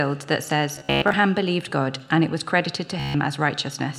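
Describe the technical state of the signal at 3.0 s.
A rapid machine-gun buzz of one short slice repeating from 3.00 to 3.15 s: Bluetooth stutter, the receiver replaying its last buffer while about 145 ms of packets went missing.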